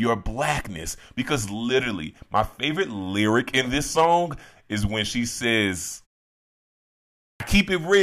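After a 1.32 s pause, the output device has gone idle and is slow to wake. At 7.30 s the first 100 ms of the returning speech is lost, a clipped start after a pause: the speech cuts in abruptly, missing its opening sounds.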